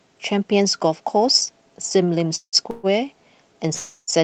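Call audio freezes at 2.35–2.56 s, 2.71–2.87 s and 3.74–4.10 s stretch the last sound into a fading buzz for 172, 129 and 339 ms. Delayed packets likely emptied the jitter buffer. Playback then resumes where it stopped, inserting gaps without losing sound.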